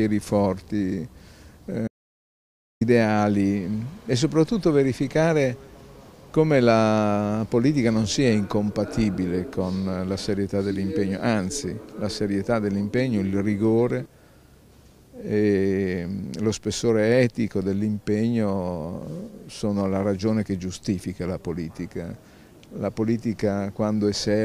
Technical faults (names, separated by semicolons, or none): audio dropout to silence